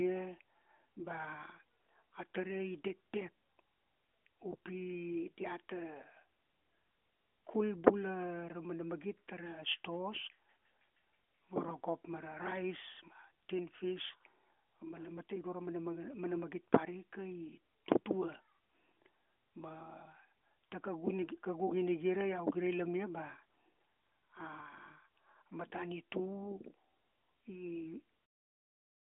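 No faults found: the speech runs through to its ending with nothing that needs flagging.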